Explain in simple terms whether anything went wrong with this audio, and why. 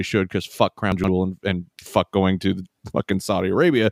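Chunks out of order, 0.92 to 1.08 s: one 40 ms piece of speech played three pieces too late, causing a brief jumbled moment.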